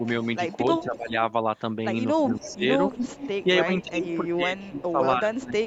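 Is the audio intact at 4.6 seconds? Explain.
No. An echo canceller likely mistook simultaneous talk for echo and turned the speech down, so from 3.01 to 5.61 s it dips by up to about 15 dB. At 4.57 to 4.68 s there is also an echo leak: echo the canceller likely missed returns as a faint copy of the speech, delayed by 279 ms and roughly 25 dB quieter.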